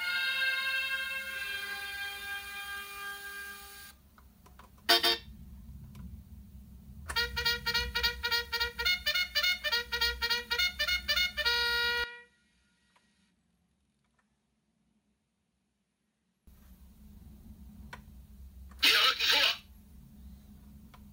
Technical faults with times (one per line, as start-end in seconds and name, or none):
12.04-16.47 input switched to a poorer device